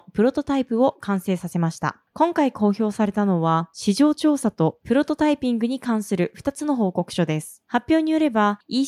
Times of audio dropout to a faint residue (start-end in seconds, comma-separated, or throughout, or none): none